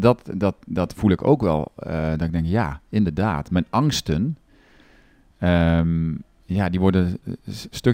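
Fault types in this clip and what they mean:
Imaging from linear upsampling, throughout: the sample rate was raised by joining neighbouring samples with straight lines, which suggests a move from about 22 kHz to 44.1 kHz. That crude interpolation barely filters anything, so the top of the original band sounds dulled, and a faint mirror copy of the speech spectrum sits from about 11.03 kHz to 22.05 kHz, roughly 35 dB down, adding a light metallic shimmer on sibilants.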